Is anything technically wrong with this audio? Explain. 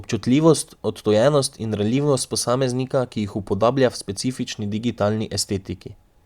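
No, nothing is technically wrong.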